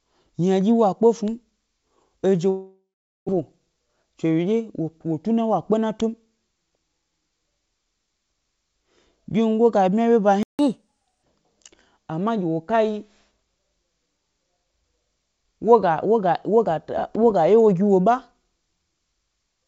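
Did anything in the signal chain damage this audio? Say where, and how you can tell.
Yes. Network: from 2.50 to 3.31 s the sound trails into a fading buzz, then about 0.43 s of silence, a likely packet dropout with roughly 0.6 s lost.

Jitter buffer: from 3.52 to 5.31 s, just before "wa kpe", pitch-period trimming runs the audio at 109% speed, hurried but unchanged in pitch.

Playback: right after "ga bmya é wyeba", output goes silent for 160 ms at 10.43 s, likely a starved or blocked player thread.

Playback catch-up: from 10.59 to 11.23 s the backlog is resampled at 1.25x, so speed and pitch both rise, about four semitones, then settle.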